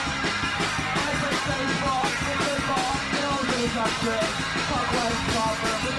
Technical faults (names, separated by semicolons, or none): none